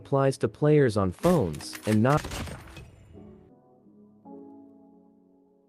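At 2.17 s the audio makes a skip ahead. Roughly a second of sound is dropped while later audio was already queued, and the two sides are butted together with no silence in between. That distinguishes it from a dropout, which would leave an audible hole or fill.

From 2.27 s to 3.93 s a jitter buffer speed-up follows. Because the receiver was holding more audio than it wanted, it repeatedly cut short pitch-period-sized pieces, removing something like 400 ms in total. The sound plays at about 121% speed and feels hurried. Unlike resampling or a tape-speed error, the pitch stays where it was.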